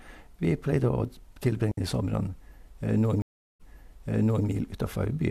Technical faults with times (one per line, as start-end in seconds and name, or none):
1.71-1.77 digital wireless dropout
3.22-4.47 stream reconnect